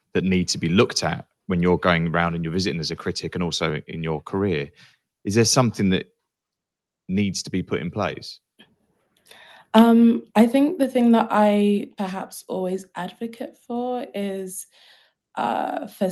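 At 10.83 s the microphone volume was likely stepped down, so speech and background fall together by about 3 dB just before "thing that".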